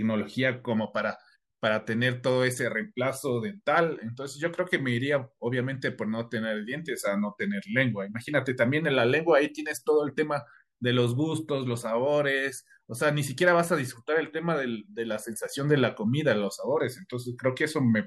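A speech recording, with nothing technically wrong with it.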